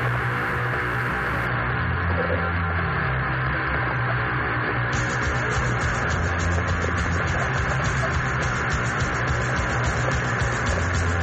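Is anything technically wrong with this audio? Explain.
Yes. From 1.47 s to the end, the adaptive stream drops to a lower bitrate: the player switched renditions when throughput fell, with no gap. Treble above about 8.3 kHz vanishes and coding artefacts thicken, which fits a step from roughly 128 to 32 kbit/s MP3.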